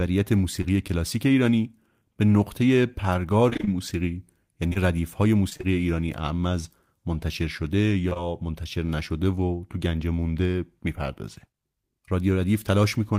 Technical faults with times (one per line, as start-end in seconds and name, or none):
0.61-0.66 short concealed packet loss
3.50-3.69 repeated packet loss (robotic sound)
4.69-4.77 short concealed packet loss
5.49-5.65 repeated packet loss (robotic sound)
8.09-8.17 short concealed packet loss